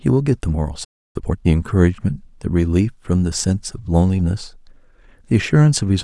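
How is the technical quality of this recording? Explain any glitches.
The speech is interrupted once and then hurried to make up the lost time.

From 0.84 to 1.16 s there is a playback stall: the speech cuts to silence for about 300 ms in mid-flow, then resumes. The likely cause is the player running short of buffered data, or its output thread being held up, so nothing reached the output until it recovered. A simple dropout would lose that stretch of speech. Here the speech then carries on after the gap.

From 1.16 to 1.46 s comes a time-compressed catch-up. The player shrinks the backlog left by the stall by cutting out small slices and cross-fading across the joins, so this stretch runs at twice normal speed. The speech sounds rushed, but its pitch stays normal. That separates it from a sped-up resample, which would raise the pitch along with the tempo.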